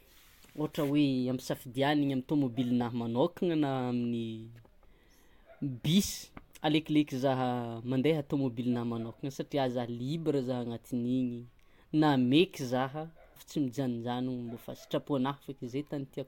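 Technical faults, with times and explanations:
13.35 s, stream segment skipped: the speech jumps abruptly forward with a brief blip at the join, as though a stretch of the talk has gone missing between one instant and the next. The likely cause is that one chunk of the segmented stream failed to arrive or load, and the player carried straight on with the following chunk. The audio on either side of the gap is spliced together directly, which leaves the hard discontinuity and the small click.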